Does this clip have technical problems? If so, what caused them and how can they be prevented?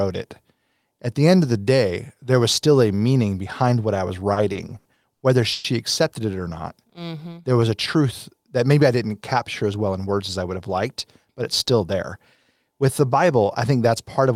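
Yes. Repeated stalls (stutter) run from 4.33 to 5.66 s, after "behind what I was" and before "accepted it or". Packets arrived late, so the jitter buffer kept running empty. Six gaps were filled with continued sound, 330 ms in total and about a quarter of that stretch, with the longest lasting 120 ms. Nothing is lost, but the audio drags. A spectrogram shows frozen, smeared harmonic bands that fade in the longer gaps. A steadier network path and a deeper jitter buffer would prevent this.

A jitter buffer slow-down follows from 6.63 to 7.66 s, between "accepted it or" and "a truth that maybe". To rebuild its reserve, the receiver repeated single pitch periods and added 130 ms, so the audio plays at 88% speed at unchanged pitch. A waveform shows runs of identical cycles stretching the syllables. Keeping packet timing stable avoids the low-buffer condition that triggers this.

A jitter buffer speed-up occurs twice: from 9.63 to 10.70 s after "maybe I didn't capture", at 110% speed with roughly a tenth of a second removed, and from 11.26 to 11.81 s at 107% with about 50 ms removed. 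The buffer held more audio than its target, and the receiver cut short pitch-period pieces to reduce the delay. On a spectrogram, syllables appear compressed in time while the harmonic spacing stays the same. Reducing packet bunching and tuning the buffer's target delay would prevent it.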